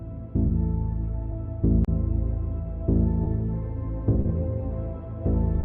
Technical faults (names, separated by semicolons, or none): clock drift between sender and receiver; short stall from a late packet